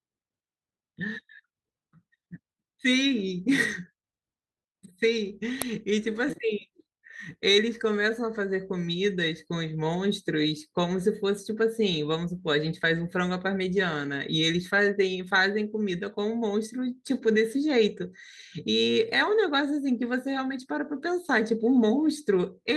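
It's a speech clip with two kinds of fault. At 1.19 to 1.21 s and again at 6.27 to 6.45 s there's a lost packet rebuilt from error correction. There's no gap, but those stretches get rough and noisy because the decoder played the low-bitrate copy carried in the following packet. The second patch runs about 100 ms, which fits five separate lost packets. At 5.62 s an uninitialised buffer throws out a very short, loud crack where leftover memory got played as samples. It lasts about 3 ms, consistent with a 128-sample block.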